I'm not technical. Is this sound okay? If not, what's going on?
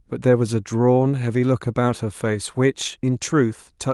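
Yes, this recording sounds fine; nothing is going wrong.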